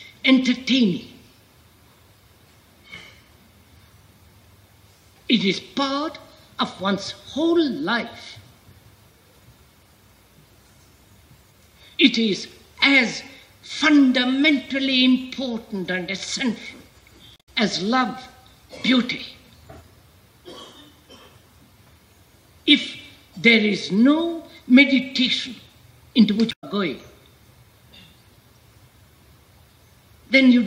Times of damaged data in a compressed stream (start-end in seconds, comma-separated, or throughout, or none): 17.33-17.49, 26.48-26.64